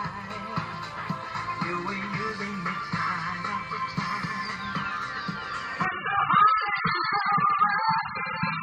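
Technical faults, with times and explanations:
5.85 to 8.62 s, adaptive stream at a lower bitrate: a slowed connection forced a switch to a far leaner rendition, so the audio goes abruptly dull with no gap, losing everything above 5 kHz as codec artefacts thicken, which points to a very low AAC rate.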